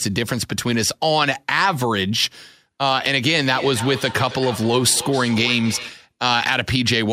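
A speech recording where, from 3.46 to 6.1 s, the talker's sound comes round again at a steady gap of roughly 300 ms, peaking about 13 dB below the speech. This is feedback echo between two devices: a second device on the call replays this microphone's signal into the room, where it is picked up again, and neither device's echo canceller removes the other's playback.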